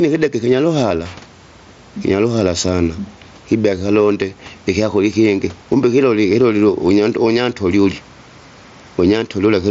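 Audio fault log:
throughout: gain pumping. The level swings by around 10 dB, so quiet and loud passages sit unnaturally close in level and the speech sounds squashed. The likely cause is input gain set far too high for the microphone, with a fast limiter or compressor clamping down on every peak and then releasing.
0.90 s: concealed Bluetooth headset packet loss. A single brief dropout of about 7.5 ms between headset and phone, short enough that the receiver's repair nearly hides it. The missing slice was filled by repeating the closest-matching piece of the preceding roughly 20 ms of waveform, rather than left as a gap.
3.62–3.64 s: concealed Bluetooth headset packet loss. A longer loss of about 22.5 ms, which fits three consecutive lost frames. Copying the recent waveform over and over produces a short buzzy, tone-like hold at full level instead of silence, followed by a small warble as the real signal takes over again, all heard through the normal 8 kHz-limited mSBC headset path.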